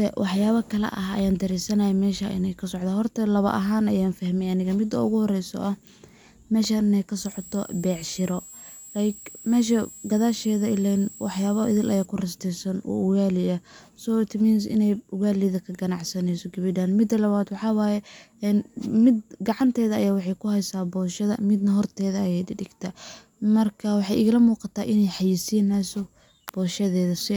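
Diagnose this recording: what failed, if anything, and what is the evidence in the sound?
Analogue side: a switching supply whistle sits about 20 dB under the speech from 7.25 to 12.05 s, drifting between 7.65 and 7.68 kHz, so a nearby regulator is chattering audibly into the path.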